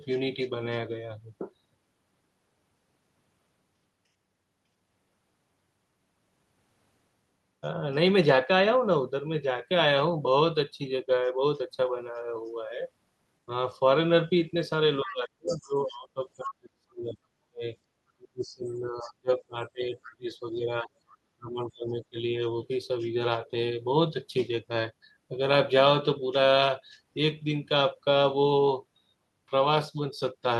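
Speech runs through this one, and between 15.03 and 22.17 s the talker gets pushed down hard, dipping and chopping for about five seconds in total, at worst by something like 35 dB. That's speech suppressed in double talk. Both ends were likely talking at once, so the echo canceller couldn't tell its own talker from the loudspeaker echo and turned everything down together. Over the same stretch you can also hear the other side's voice leaking through, in short scraps at 15.07–15.66, 16.43–16.54, 19.02–19.10, 20.03–20.08 and 21.10–21.17 s. The first two are fairly clear, roughly 10 to 15 dB under the talker, and the later ones sink until the last is barely there. The likely cause is that the far end playing on the device's loudspeaker wasn't fully cancelled from the mic, so bits of that voice slip in underneath.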